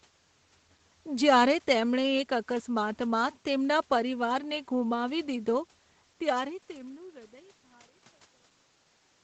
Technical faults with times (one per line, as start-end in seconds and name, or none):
none